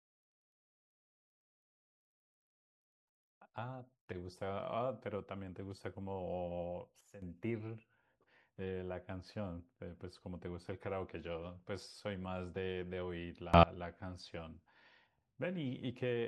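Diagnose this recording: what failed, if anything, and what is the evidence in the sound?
A digital gain stage in the processing chain likely applied new settings instantly instead of ramping them, producing a sudden gain jump twice. From 7.01 to 7.22 s the speech and its background noise drop together by about 12 dB. From 13.54 to 13.63 s both leap up by about 24 dB. Because the level changes between adjacent samples, the noise floor steps along with the voice and each transition is abrupt, sometimes with a click.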